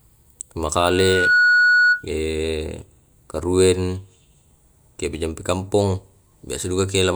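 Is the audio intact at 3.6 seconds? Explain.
Yes, the speech at 3.6 seconds plays through intact, with no dropout, click, distortion or other fault at that moment.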